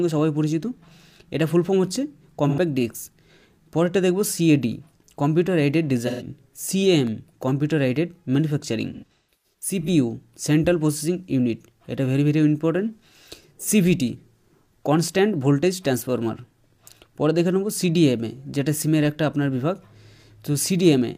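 AAC frame loss with concealment hits at 2.48 to 2.59 s and 6.07 to 6.26 s. The decoder rebuilds the missing audio from the last good spectrum, leaving brief smeared, noisy patches. From 8.93 to 9.88 s, losses scatter across nearly a second, the longest run around 150 ms, sounding smeared and phasey.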